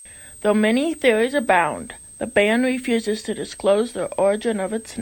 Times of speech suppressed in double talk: none

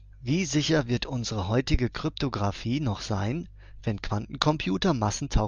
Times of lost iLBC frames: none

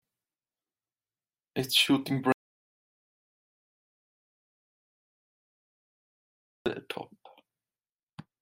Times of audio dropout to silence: 2.32-6.66

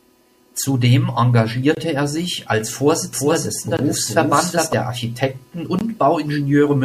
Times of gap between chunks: 1.75-1.77, 3.77-3.79, 5.79-5.81

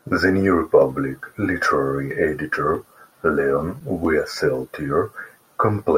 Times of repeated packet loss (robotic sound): none

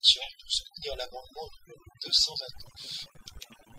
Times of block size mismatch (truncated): 2.52-3.79

